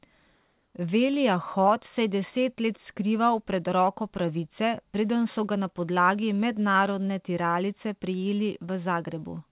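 Speech carried over a call path band-limited to 4 kHz; from 0.35 to 0.74 s the real background, about 46 dB below the loudest speech, gives way to a steady, featureless hiss about 1 dB quieter, likely comfort noise in place of the background during a discontinuous-transmission pause.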